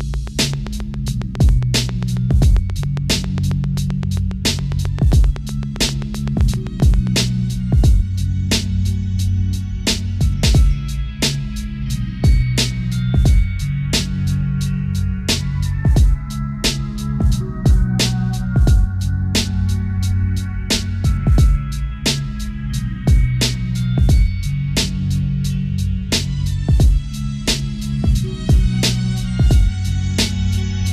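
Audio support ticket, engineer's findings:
Train of clicks, 0.01–7.21 s. Some fifty near-identical pulses at a steady 7.5 per second, well above programme level, audible in gaps too. Likely external interference or a faulty connection. Even spacing and shape rule out random crackle.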